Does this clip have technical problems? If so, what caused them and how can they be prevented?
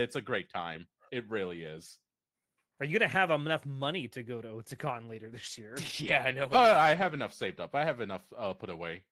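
Yes. From 4.89 s to 7.99 s the speech turns coarse and watery and loses its top end. It sits at its worst for about 2.04 s before clearing. This is a call bitrate drop. The call's bandwidth estimate fell, and the encoder was told to spend far fewer bits, which fits a fall from 32 kbps to around 14 kbps. At that rate the codec quantises more coarsely and trims the high frequencies, leaving a muffled sound until the rate recovers. To prevent it, give the call a stable, uncongested network path with enough headroom, and set a sensible minimum bitrate floor in the encoder.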